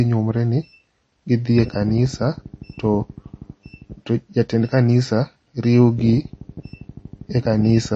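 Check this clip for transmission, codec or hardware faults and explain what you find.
One fault runs through the whole speech clip. Throughout, the speech sounds watery and swirly, with nothing at all above 8.4 kHz, so s sounds lose their sparkle and turn metallic and chirpy. This is likely MP3 compression, with plainly audible damage that fits a stream of about 32 kbps. Starved of bits, the encoder cuts the treble at a fixed point and drops weak frequency lines, which flicker on and off between frames and produce the swirling texture.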